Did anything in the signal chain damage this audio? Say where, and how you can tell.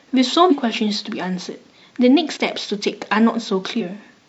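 Yes, in the codec or storage stage: compressed frames skipped. Whole frames went missing or were rejected by the decoder, so the speech jumps ahead at 0.47–0.52 s (about three frames), 2.33–2.37 s and 3.77–3.82 s (one each). The frames are 46.4 ms long.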